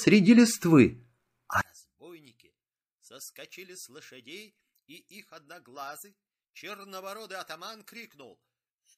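Speech clip; from 1.61 s to the end, the mono sum drops by about 30 dB, likely caused by one channel inverted cancelling the centred voice.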